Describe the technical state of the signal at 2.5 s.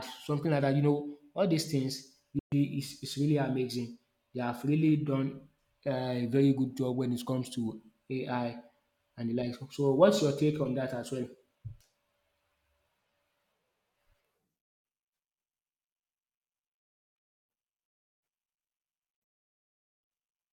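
At 2.5 s the signal is in a Bluetooth dropout: it goes silent from 2.39 to 2.52 s, about 128 ms, with abrupt edges or a fade of a few milliseconds, then resumes at "is is really amazing". Unlike a stall, nothing is delayed: the missing stretch is skipped, most likely because packets arrived too late.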